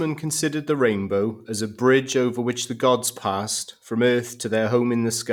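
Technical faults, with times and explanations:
1.63–2.62 s, CD scratch ticks: five short ticks land in the speech between "considered the rainbow as" and "the gods passed from", spaced evenly at roughly five per second, the longest lasting only about a millisecond and a half. A scratch or blemish on the disc corrupts more data than the error correction can rebuild. The player then interpolates or mutes those few samples, once on each turn of the disc, giving brief, regularly repeating clicks.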